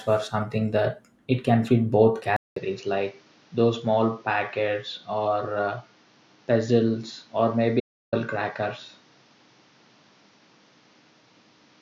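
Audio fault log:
2.36 s to end: input switched to a poorer device. After a 200 ms silence the sound turns duller, with nothing above 7 kHz, about 5 dB quieter, and a new noise floor roughly 35 dB down. A likely change to a narrower-band microphone.
7.80 to 8.13 s: audio dropout to silence. For 323 ms the sound stops dead, with no room tone at all. A likely lost input link, and whatever was said then is gone.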